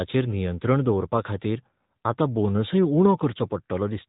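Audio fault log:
Throughout: AMR narrowband mobile codec. The speech is squeezed into the telephone band. Nothing above 4 kHz survives, so sibilants lose their edge and the sound turns boxy. The codec rebuilds each 20 ms frame from a vocal-tract model fed by a few pulses. That leaves a plainly audible buzzy, synthetic grain on the speech. The degree of damage points to a mid-rate mode, which fits roughly 10 kbps.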